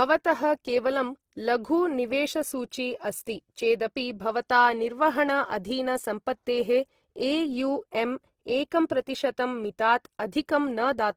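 Throughout the speech, rough, grainy texture points to likely Opus compression near 16 kbps. The spectrogram shows bands noise-filled rather than holed, reaching 20.2 kHz.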